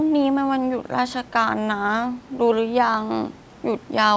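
Nothing in this speech clip points to a technical fault: the audio has passed through a call's normal microphone processing, which trims the lowest bass and leaves nothing above 8 kHz, and the room's background noise sits about 32 dB below the speech.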